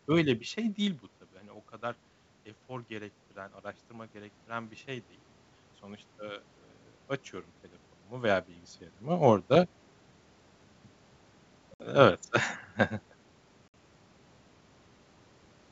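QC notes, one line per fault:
2.67–5.16 s, automatic gain rising: the input dropped by about 13 dB, so the AGC slowly pushed its gain up about 4 dB, and the voice and room noise swell together.
11.74–11.81 s and 13.68–13.74 s, packet loss on an ADPCM call: two hard-edged 60 ms silent holes, roughly a few packets each. The decoder's predictor and step size drift out of sync, so speech returns slightly off-level or rough and then settles within tens of milliseconds.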